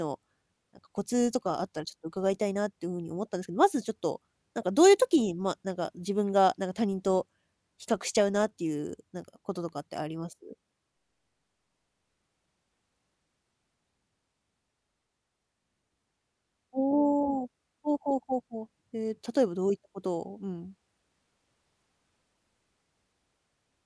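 Listening to this speech recording, nothing technically wrong stood out at any point.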